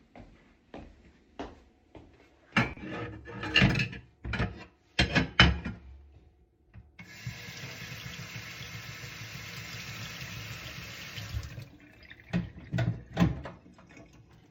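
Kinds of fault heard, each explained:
Corrupt frame decoded: from 2.71 to 2.77 s, damaged compressed data was played back instead of being concealed, so misread gains and codes place energy at wrong frequencies for about 66 ms. This suggests roughly two bad frames, heard as a quiet chirp, squeak, blip or burst of noise peaking around -35 dBFS.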